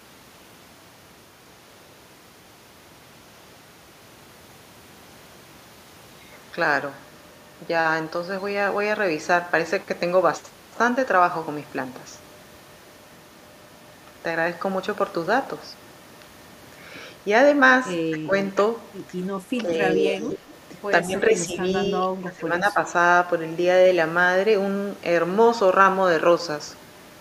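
At 18.11–18.33, 19.63–19.78, 19.95–20.42, 21.03–21.64 and 22.01–22.78 s, the speech dips, down about 10 to 15 dB. That's likely speech suppressed in double talk, with the echo canceller ducking everything.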